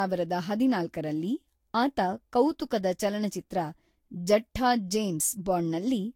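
Speech with generation loss throughout: the sound is swirly, smeared and hollow, with blurred consonant onsets and nothing above 16.7 kHz. A spectrogram would show a hard ceiling, patchy holes and smudged transients, likely from about four repeated Vorbis encodes near 62 kbit/s.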